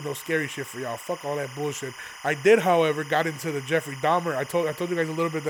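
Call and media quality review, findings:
Steady chirping warble behind the speech throughout, around 20 dB down, alternating near 1 and 2 kHz. Timecode bleed: 25 fps linear timecode leaking from an adjacent track or cable, its square-wave biphase code crosstalking into the audio path.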